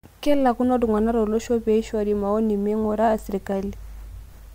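No technical faults can be heard anywhere in the speech.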